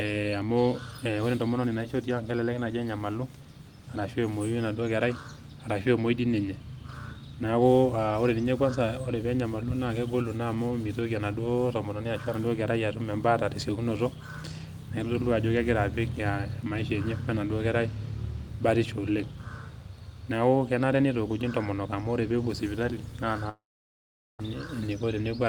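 A long network dropout runs from 23.49 to 24.41 s, just after "ore peepuo sipitali naa". The speech breaks off, and the last sound is stretched into a brief fading buzz before about 0.79 s of near-silence takes over. This is likely a stall in incoming audio: the receiver concealed the gap by extending what it last had, then gave up, and the speech resumes with roughly 0.9 s missing.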